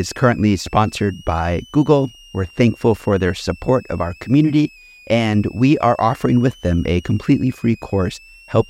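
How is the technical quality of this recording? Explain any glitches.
The recording carries a switching supply whistle from start to finish. A thin, high tone sits behind the speech. It wanders between about 2.46 kHz and 3.03 kHz, mostly near 3 kHz. It stays well below the speech, roughly 30 dB down. A switching power supply is running in an audible burst mode, or beating against another supply. Its frequency shifts with load, so the pitch drifts.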